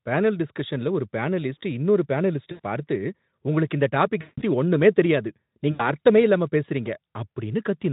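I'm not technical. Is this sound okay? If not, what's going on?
No. This is VoIP packet loss concealed by the speech codec. At 2.51, 4.21 and 5.71 seconds, pieces of the call went missing, and the decoder guessed from the last sound. The voice smears into a fading buzz, then sounds weak briefly.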